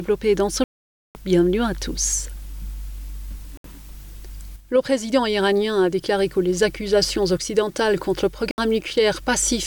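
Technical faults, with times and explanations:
0.64 to 1.15 s, Bluetooth dropout: the sound cuts out for about half a second, likely from packets missing the headphones, then picks up further along as if it had played on.
3.57 to 3.65 s and 8.51 to 8.58 s, Bluetooth dropout: two short holes of about 70 ms each, with the same abrupt silence and the sound skipping ahead.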